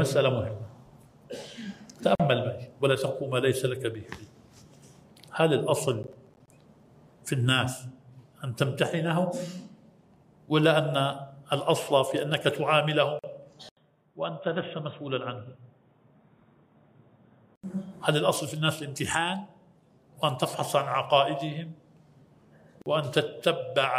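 At 2.15 to 2.20 s the sound drops out for about 44 ms and then carries on where it stopped. This is a gap at a join of encoded pieces. Two separately encoded pieces were joined without trimming. The start delay and the padded last frame both remain. The edges are smeared by the codec.

From 6.03 to 6.50 s a gritty crackle rides on the sound. This is processor overload crackle. The processor missed a run of buffer deadlines, around fifteen of them. Each miss left a short silent hole, which fits buffers of roughly 10 ms. The holes come in quick succession and are heard as tearing. It stops when the load passes.

At 13.19 to 13.24 s a second join gap opens, about 45 ms long.

At 13.69 s there is a silence of about 80 ms. Then the sound turns dull and boxy until 17.64 s. Nothing is left above 3.8 kHz. The level falls by a few decibels. A new background noise appears, far below the signal, around 55 dB down. 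The character then clears again. This is most likely an input switched to a poorer device, a narrower-band microphone or headset path with its own tone and noise.

At 22.82 to 22.86 s a third join gap appears, about 43 ms long.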